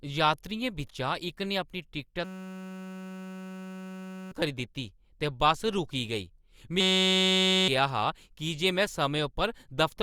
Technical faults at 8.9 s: none

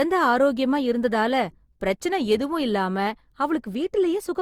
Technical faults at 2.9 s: generation loss

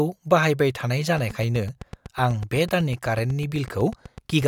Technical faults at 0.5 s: none

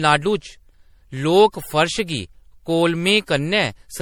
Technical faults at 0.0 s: generation loss

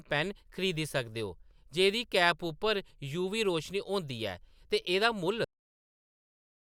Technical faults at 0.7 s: none

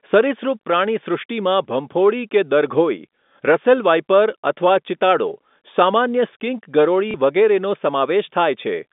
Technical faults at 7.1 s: packet loss with last packet repeated

